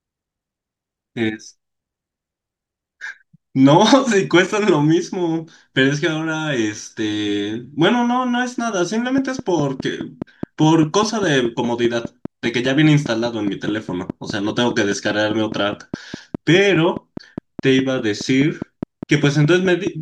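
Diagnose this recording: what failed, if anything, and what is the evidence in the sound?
A train of clicks runs from 9.18 s to 19.88 s: some fifty near-identical ticks at a steady 4.86 per second, peaking about 5 dB above the speech and plainly audible in the pauses too. Because the pulses keep their own fixed rhythm regardless of what is being said, they come from outside the speech itself, most likely interference coupling into the analogue wiring or a faltering interface injecting periodic pulses.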